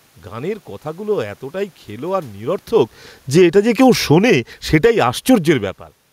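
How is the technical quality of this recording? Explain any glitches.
One system glitch. Automatic gain falling, 2.73 to 5.82 s, after "কথাগুলো এতটাই খেলো আর": the gain control judged the input too loud or its background noise too strong and lowered it about 7 dB, so the speech and the room noise sink together. The level shifts near 2.5 and 5.5 s come from the talker moving, not the system.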